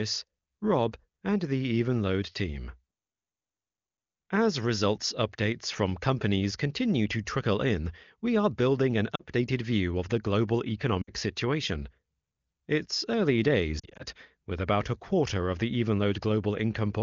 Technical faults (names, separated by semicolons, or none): lost AMR speech frames